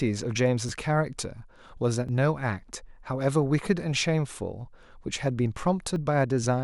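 Speech with three jumps at 0.69, 2.09 and 5.96 s, where a few milliseconds of sound are skipped; this is likely a dropped buffer (overrun), seen as vertical spectrogram lines and waveform discontinuities.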